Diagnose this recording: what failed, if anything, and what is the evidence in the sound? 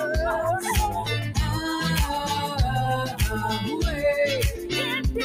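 The failure is in call processing: a noise suppressor applied to music or sounds, active throughout. Attacks mostly pass. Held tones and tails are pulled down by around 5 dB, so the level pumps and thins. The suppressor mistakes sustained content for background noise.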